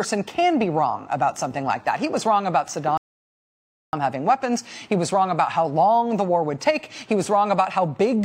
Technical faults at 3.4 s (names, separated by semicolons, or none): rebuffering stall